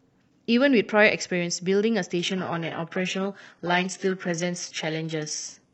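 A speech clip where, from about 2.19 s to the end, an adaptive stream at a lower bitrate takes over. Quality drops suddenly with no gap, going from roughly 96 kbit/s AAC to about 12 kbit/s HE-AAC. The treble turns synthetic, and a spectrogram shows the upper band abruptly becoming patchy, replicated texture.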